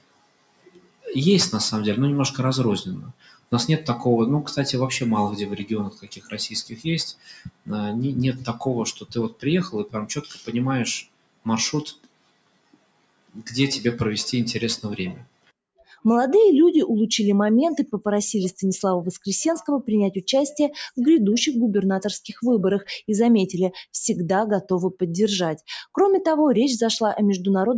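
Throughout the clip, a noise suppressor applied to music or sounds mistakes sustained material for noise. Gain swings by around 20 dB: attacks pass while held tones and reverb tails sink, so the sound pumps and thins. Content stops near 8 kHz, as expected from call microphone processing.

Sound cut by the noise suppressor occurs at 0.00–1.07 s, 3.06–3.52 s, 5.63–7.69 s, 8.50–9.45 s, 9.86–10.50 s, 11.02–11.47 s, 11.89–13.50 s and 15.14–16.04 s. Steady passages fall by up to about 21 dB, and decays end abruptly.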